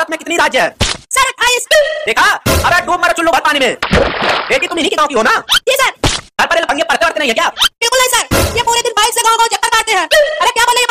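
No technical faults can be heard anywhere in this clip.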